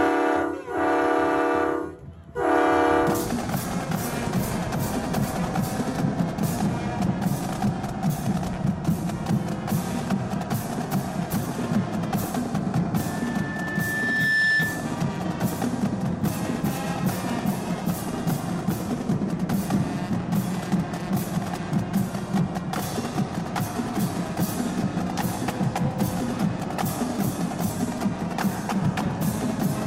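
A microphone picking up its own loudspeaker causes loudspeaker feedback squeal: a 1.8 kHz tone swells over about one and a half seconds from 12.97 s, ending at 15.08 s, roughly 5 dB above the audio.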